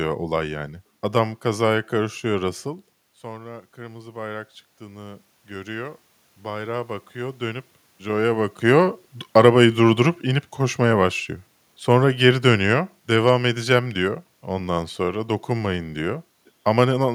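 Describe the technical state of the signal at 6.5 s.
At 6.5 s the signal is in the middle of an automatic gain rising episode that runs from 3.21 to 7.76 s. After the input level fell by about 15 dB, shortly after the talker moved back at around 2.5 s, the gain control has been raising its gain step by step, by about 7 dB in all. The speech and the room noise behind it swell together, steadily and gently, rather than at a single point.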